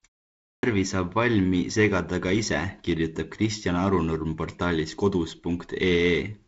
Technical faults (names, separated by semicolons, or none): clipped start after a pause